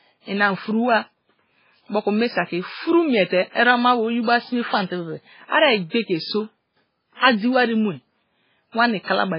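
Speech with MP3 compression damage running the full length of the clip. Nothing remains above about 5.3 kHz, so the treble is cut off flat, and the heavy artefacts point to a very low bitrate, around 16 kbps. At that rate the encoder likely starved its quieter frequency lines, dropping them in and out between frames. That leaves a watery, swirling texture, metallic chirps on sibilants, and smeared consonant onsets.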